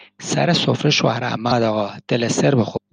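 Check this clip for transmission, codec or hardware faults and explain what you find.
Found a couple of glitches in the speech, both the same kind. There's damaged data in a compressed stream at 1.48–1.52 s and 2.73–2.78 s: corrupt frames throw the decoder off sync, leaving short blips.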